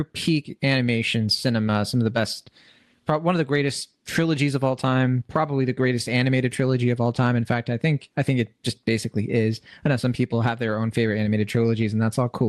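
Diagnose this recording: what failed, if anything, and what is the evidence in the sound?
Nothing failed; the call-codec path works as expected.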